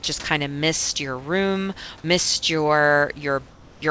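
Speech over a G.722 call path, band-limited to nothing above 8 kHz. From 0.04 to 0.06 s, just before "kind of mist your", a brief burst of sound drops out as steady noise, likely sound dropped by the voice detector. From 3.50 to 3.82 s, comfort noise likely replaces the background: a smooth, uniform band on the spectrogram sits about 3 dB quieter than the real room noise, without its texture.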